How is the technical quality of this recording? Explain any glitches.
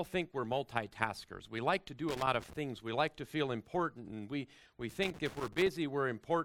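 The recording has two bursts of loose connector crackle, first from 2.09 to 2.53 s and again from 4.90 to 5.69 s. Both point to a worn or dirty contact somewhere in the signal chain that momentarily loses and regains connection as it shifts. Each break chops the audio, and any DC present on the line turns those interruptions into sharp pops. The result is an irregular, scratchy crackle over the sound, with the second burst lasting longer.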